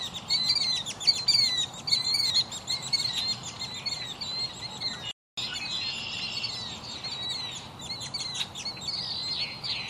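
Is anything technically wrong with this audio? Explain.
Yes, there are two faults. At 2.30 s, compressed frames are skipped. About a tenth of a second of audio is lost, since missing or damaged frames never decode, so the audio jumps ahead.

From 5.11 to 5.37 s, there is a playback stall. The sound cuts to silence for 261 ms mid-flow, then resumes. The likely cause is the player running out of data or its thread being blocked.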